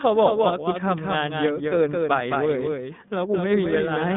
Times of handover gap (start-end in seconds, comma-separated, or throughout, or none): none